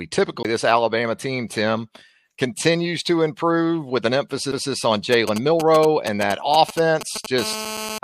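At 0.43 to 0.45 s, and again at 4.52 s just after "to improve with an", a CD skip occurs: the laser jumps to another turn of the spiral, so the audio mutes briefly (roughly 20 ms, then just a few milliseconds) with a tick and resumes from a different place. The waveform shows a short flat gap and a discontinuity, and the spectrogram shows a thin vertical click line.

From 5.13 to 7.26 s, GSM signalling bursts from a nearby 2G phone are rectified by the audio circuit, giving a galloping dit-dit-dit of short 217 Hz buzzes around 10 dB below the speech. On a spectrogram they appear as intermittent clusters of evenly spaced harmonic stripes. In the waveform they show as groups of spiky pulses.

From 7.38 to 7.98 s, the phone enters a call and a continuous GSM phone buzz follows. This is a hard, raspy 217 Hz tone rich in harmonics, unrelated to the speech, about 9 dB below it. The spectrogram shows a steady comb of horizontal lines at multiples of 217 Hz, and the waveform shows a regular pulse train throughout.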